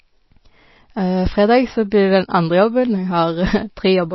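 Speech with plainly audible MP3 compression throughout. Nothing sounds above 5.8 kHz. The dulled, watery quality likely reflects a low bitrate, near 24 kbps.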